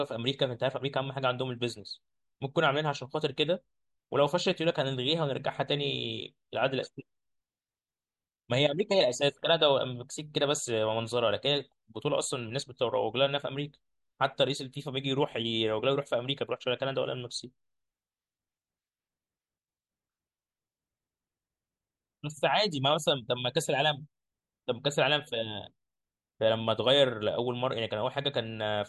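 No technical faults can be heard in this speech recording.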